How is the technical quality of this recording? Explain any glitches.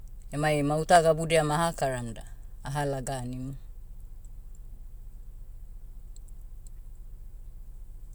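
Two brief clicks mar this speech recording. Dropped samples, at 0.96 s and again at 2.93 s: each click likely comes from a tiny run of samples, a fraction of a millisecond, going missing from the stream, so the waveform leaps straight from one value to a later one. The gap is far too short to remove any audible sound, but the sudden step is heard as a single sharp click, showing as a thin vertical line across the spectrum.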